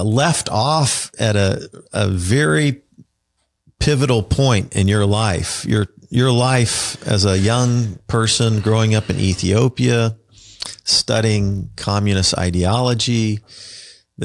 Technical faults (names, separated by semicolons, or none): resampler restarted on every block